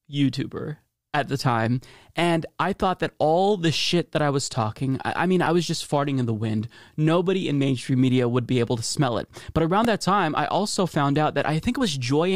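At 5.46 s and again at 9.85 s there is a repeated buffer: new audio arrived late, so a tiny 1.45 ms slice, which fits a 64-sample buffer, replayed several times with hard joins. Each event is a brief buzzy click, with a few milliseconds of sound lost.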